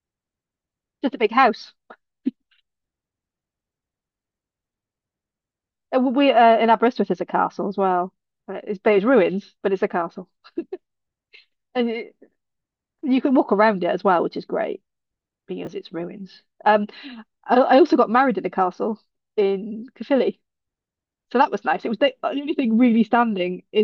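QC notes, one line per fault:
15.65–15.67 s, chunks out of order: a brief jumbled flicker in the speech. One 10 ms chunk of audio arrives one chunk late and plays after its successor, so nothing is missing, but the swapped order leaves three hard joins.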